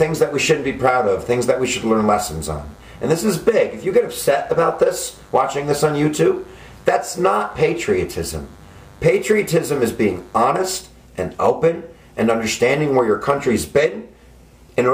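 From 0 to 10.41 s, DECT cordless phone buzz: rectified 100 Hz radio bursts give a thin, steady buzz roughly 30 dB down, drawn as evenly spaced harmonic lines on a spectrogram.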